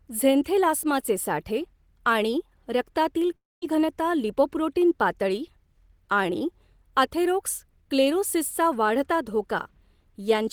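At 3.36–3.63 s the speech trails into a fading buzz and 210 ms of silence, losing 260 ms of audio: likely a long network dropout.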